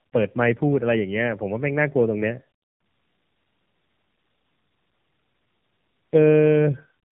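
Tandem speech coding runs through the whole clip: the speech was decoded and re-encoded by two AMR-NB coders, likely at 12.2 and then 7.95 kbit/s with a G.711 link between. The second pass compounds the first, leaving rough, warbly, muffled speech with nothing above 3.8 kHz.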